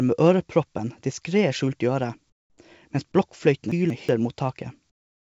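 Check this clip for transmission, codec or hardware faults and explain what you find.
Two kinds of fault are audible, one heard twice, and the clip carries no sound above 8 kHz, which points to a wideband call codec such as G.722.

Comfort noise in place of the background, 2.30–2.58 s and 4.90–5.34 s: the likely cause is discontinuous transmission, where the sender goes quiet in pauses and the receiver synthesises noise. The real background gives way to a flat, featureless hiss, about 14 dB quieter in the first gap and about 21 dB quieter in the second.

Chunks out of order, 3.72–4.09 s: a 186 ms block of audio arrived one chunk late and plays after the block that should follow it. Nothing is missing, but the sound jumps backward, with three hard joins and a brief jumbled stretch.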